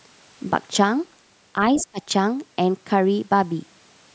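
At 1.76 s a second, fainter voice appears under the speech and lasts until 1.85 s. It sits roughly 15 dB below the main talker. This is the other side's voice leaking through. The likely cause is the far end's audio, played on the talker's loudspeaker, reaching the microphone and not being fully cancelled by the echo canceller, so a short scrap of it passes into the outgoing signal.

Starting at 1.78 s, overlapping that leak, the talker's own speech is pulled down, with the deepest dip around 20 dB, until 2.0 s. The affected stretch totals about a fifth of a second. The level drop makes the speech dip briefly. This is speech suppressed in double talk: with both sides present at once, the echo canceller likely attenuates the whole signal rather than separating its own talker from the echo. The band limit from the call microphone processing, with nothing above 8 kHz, is present throughout.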